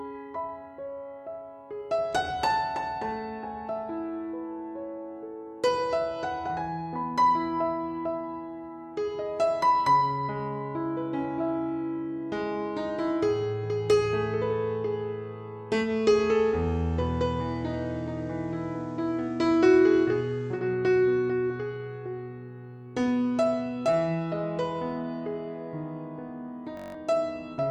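From 15.80 s to 20.64 s the audio shows digital radio blending to analogue: the receiver lost its digital stream and cross-faded in about 103 ms to the FM broadcast, then back. A spectrogram shows a faint hiss floor, roughly 35 dB down, with no level step in the waveform. At 26.77–26.94 s a system hang loop repeats one 21.33 ms slice eight times, a 46.9 Hz buzz consistent with a 1024-sample buffer. It appears as identical repeating waveform cycles and vertical spectrogram striping, and about 150 ms of audio is lost.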